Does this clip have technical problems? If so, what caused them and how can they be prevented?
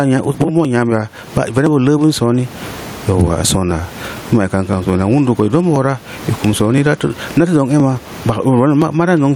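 Yes. Throughout the speech, the background swells in pauses and ducks by about 20 dB under loud syllables. This gain pumping is likely from excessive input gain driving a fast limiter. On a spectrogram, the noise floor brightens between phrases and darkens beneath speech. Lower the input gain so the limiter rarely engages.

Periodic USB or driver dropouts repeat every 1.02 s from 0.65 to 8.82 s, about ten times. Each skips roughly a millisecond of audio and causes a tick. They appear as waveform discontinuities and thin vertical broadband lines. Stop background tasks that poll the USB bus, or enlarge the audio buffer.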